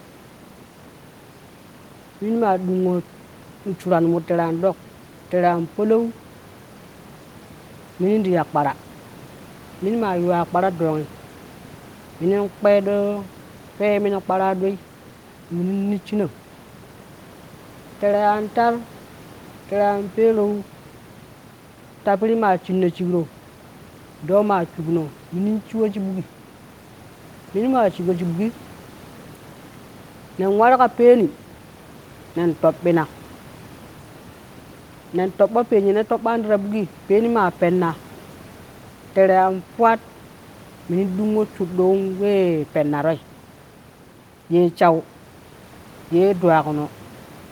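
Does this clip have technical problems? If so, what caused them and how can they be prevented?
No, the speech shows no technical faults, with the room's background noise sitting about 24 dB below it as part of the recording itself.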